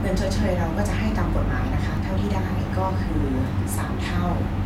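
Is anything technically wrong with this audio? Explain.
Yes, there are two DC steps, at 1.97 s and 3.78 s. At each, the waveform's zero line jumps abruptly and then drifts back as a 20 Hz high-pass bleeds it away. Each is heard as a brief low thump under the speech. The waveform shows an offset that eases back toward centre, and the spectrogram shows a low-frequency vertical smear.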